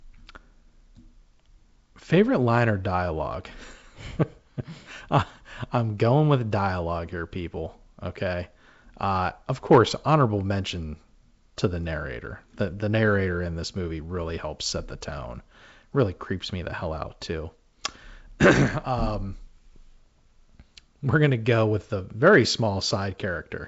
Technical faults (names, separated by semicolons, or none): none